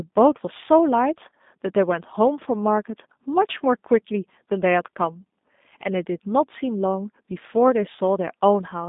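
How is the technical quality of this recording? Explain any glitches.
The speech has narrowband telephone quality, with audible codec damage from start to finish.

Throughout, G.729 codec coding rebuilds each 10 ms frame from a vocal tract filter, a pitch predictor and a few pulses, which fits an 8 kbit/s stream. Speech sounds rough and synthetic. A spectrogram shows energy confined to roughly 200 Hz to 3.7 kHz, with nothing above 3.8 kHz.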